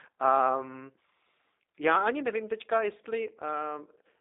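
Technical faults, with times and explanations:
Throughout, G.729 codec: the speech sits in a narrow telephone band of about 300 Hz to 3.7 kHz, with nothing above 3.8 kHz, and has a plainly audible rough, synthetic buzz. This fits an 8 kbit/s G.729A coder that rebuilds each frame from a vocal tract filter and a few pulses. Plain band-limiting would only muffle the speech without adding this coarse texture.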